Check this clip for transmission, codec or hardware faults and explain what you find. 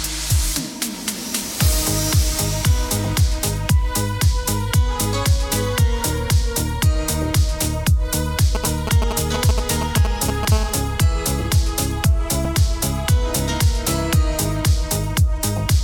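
Three faults show up: GSM interference in two forms, and a brief decoding glitch in the compressed stream.

From 8.55 to 10.45 s there are GSM signalling bursts: a galloping dit-dit-dit of ticks and short buzzes repeating at about 217 Hz, fairly loud and close to the level of the programme. A nearby 2G phone is sending only short groups of radio pulses, which the audio circuitry rectifies into sound. The gaps between groups set it apart from the continuous call buzz.

From 10.52 to 13.32 s the GSM phone buzz becomes steady: a hard, raspy 216.7 Hz tone rich in harmonics, about 18 dB below the signal and unrelated to it. The phone is now in a call and transmitting continuously, so the rectified pulse train never breaks. Its unbroken rhythm distinguishes it from the signalling bursts.

At 12.45 s, during the buzz, there is damaged data in a compressed stream: a very short chirp or blip. Corrupted bytes leave the decoder unable to read a frame, so it loses sync and jumps ahead to the next valid header. 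Unlike the phone interference, it is a single isolated event with no repeating 217 Hz pattern.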